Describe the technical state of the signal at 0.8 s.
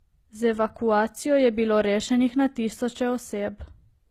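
At 0.8 s the speech has a smeared, doubly processed texture, with swirly, metallic high-frequency detail layered over a duller coding sheen, and nothing above 15.6 kHz. The fault runs through the whole clip, and the cause is likely transcoding between lossy codecs: a low-rate HE-AAC pass, around 20 kbit/s by the sound of it, then re-encoded to Opus, which wastes bits preserving the first codec's artefacts while adding its own.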